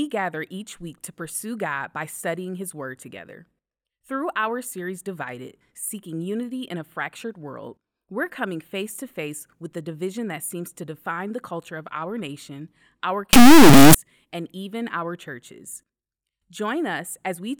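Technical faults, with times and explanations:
13.33 to 13.95 s, integer read as float: the speech becomes an extremely loud, buzzing square wave, which fits 32-bit integer samples being read as 32-bit floats. The values land near zero or far past full scale, so the output slams between silence and the clipping limit. Unlike ordinary clipping, almost nothing of the speech's shape survives, and the quietest moments drop to dead silence.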